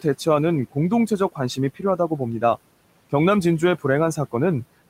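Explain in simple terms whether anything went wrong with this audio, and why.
Between 1.75 and 2.2 seconds, some of the speech gets swallowed: the noise suppressor mistook parts of it for background noise and turned them down along with the background. Only brief scraps, adding up to a small fraction of a second, go faint, such as soft consonants or word endings. Unlike a dropout, the sound never cuts to silence. The faint room noise underneath is part of the recording itself and not a fault.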